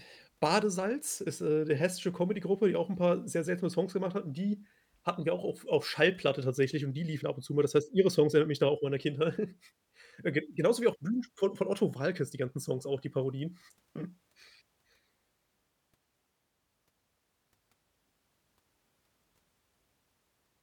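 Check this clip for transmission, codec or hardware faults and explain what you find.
No faults turn up anywhere in the clip.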